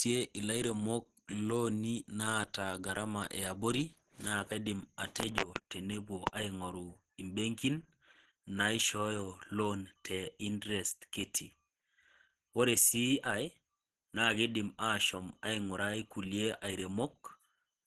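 From start to finish, the speech carries plainly audible codec damage, most likely Opus compression running in its hybrid mode at a low rate, which fits roughly 16 kbps. Nothing sounds above about 12.3 kHz, and the voice comes across muffled and hoarse, with a rough, grainy texture rather than the watery swirl of MP3. Because the band energies stay filled, there are few hollow gaps between them, mostly coarseness layered over the sound.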